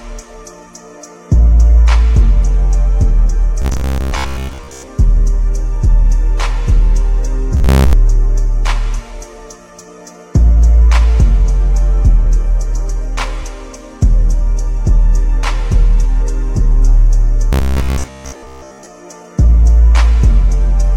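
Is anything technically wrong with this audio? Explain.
Yes, there's robotic sound from repeated short buffers at 3.62–4.88 s, 7.57–7.93 s and 17.53–18.86 s: a rigid 66.7 Hz buzz, likely from 15 ms chunks repeating to cover most of the missing audio.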